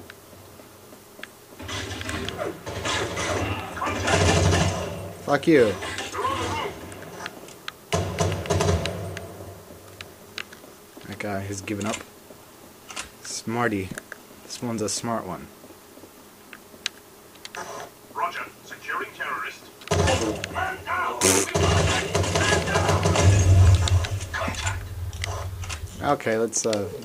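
No technical faults are audible anywhere in the recording.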